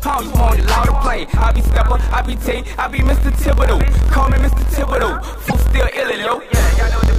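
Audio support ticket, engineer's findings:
Block size mismatch (truncated), present throughout. Steady buzz at about 43.1 Hz under all the sound. Playback runs 1.12 times fast with timbre unchanged. Probable component: buffer handoff between two processing stages. The upstream stage writes longer blocks than the downstream stage reads, so the tail of every block is dropped. The buzz rate fits a 1024-sample read. The discarded tails account for the speed-up.

Broken MP3 bit reservoir, likely cause. Audio skips ahead at 5.47 s and is disrupted until 5.53 s. Probable component: MP3 decoder after frames lost in transport or storage. Each frame borrows bits from earlier frames. Once frames are removed, the next frames fetch bytes that belong to a different frame and decode them as garbage. The disruption lasts a few 26.1 ms frames before decoding recovers.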